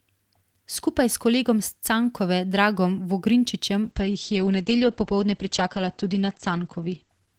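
At 3.83 s the call's bandwidth estimate falls and the encoder is starved of bits, a call bitrate drop that fits a fall from about 32 to 10 kbps. The speech turns coarse and watery, its bandwidth narrowing from 20 kHz to 8 kHz, and sounds muffled through 7.39 s.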